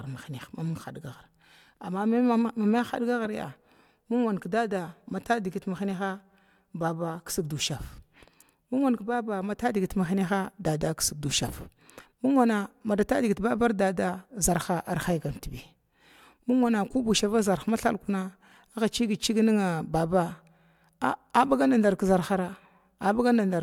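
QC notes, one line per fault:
Nothing stood out on listening to this speech recording.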